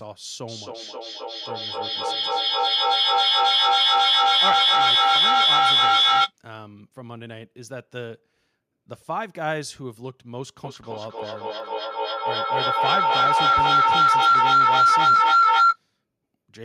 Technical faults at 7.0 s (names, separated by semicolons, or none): none